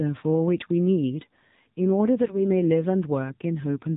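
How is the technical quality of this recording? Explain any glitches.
The recording has clear mobile-phone quality throughout, plus one brief burst of damage.

From start to finish the speech sounds muffled, buzzy and somewhat synthetic, with nothing above 4 kHz. That is the AMR narrowband mobile codec, which rebuilds the voice from a vocal-tract model fed by sparse pulses; the plainly audible roughness fits a low mode around 7.4 kbps.

From 2.25 to 2.38 s the speech turns hoarse, scratchy and gargly while keeping roughly its pitch and level. These are AMR bit errors: a few percent of the weakly protected bits in about three 20 ms frames arrived flipped, misplacing the pulses and distorting the finer pitch, gain and spectrum values.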